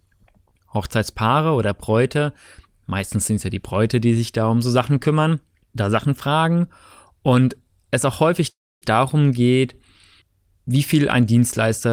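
At 8.49 s the speech hangs as a call audio freeze: a fading buzz, then near silence until 8.84 s, likely from delayed packets draining the jitter buffer, resuming without loss.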